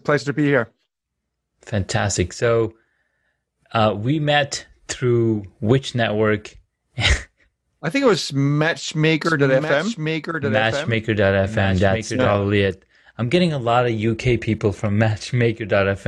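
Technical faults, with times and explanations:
9.25–12.31 s: doubled audio track. A second copy of the speech runs about a second behind the original at a few decibels lower, so each phrase is heard again while the next one is already playing. The copy is full-band and dry, with no decay or room colour, and it cuts in and out abruptly at the edges of the span. The likely cause is a slower second capture path or an edit that left two copies out of step.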